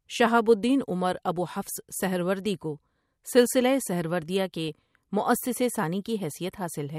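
At 1.75 to 1.83 s the speech picks up a short burst of DAB burbling. Weak reception let a small trickle of bit errors slip past error correction, corrupting individual sub-bands across three frames.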